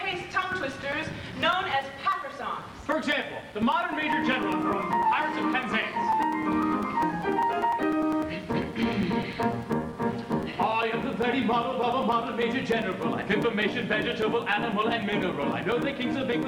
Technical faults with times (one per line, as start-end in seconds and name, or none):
0.12-16.43 periodic USB or driver dropouts